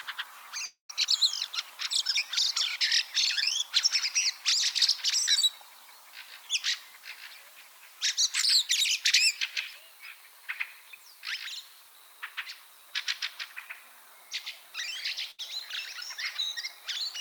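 A long network dropout runs from 0.65 to 0.91 s. The last sound before the gap is stretched into a buzz or hiss that fades over roughly a quarter of a second, with about 130 ms of silence inside that stretch, and then the audio picks up further along. About 240 ms of material is gone. The likely cause is a stall in incoming audio, with the receiver covering the hole by repeating and fading what it last had.

A burst of packet loss follows at 15.31 to 15.40 s. Here about 80 ms failed to arrive in time, and the receiver bridged nearly all of it, about 74 ms, by carrying the preceding sound forward at a falling level. The result is a brief held, dimming smear rather than a clean gap. The audio then resumes slightly ahead of where it left off, so that short slice is simply missing.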